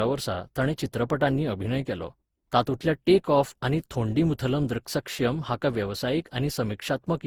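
Throughout, repeated Opus re-encoding, about ten passes, likely caused generation loss: the speech sounds swirly, hollow and smeared, with blurred attacks.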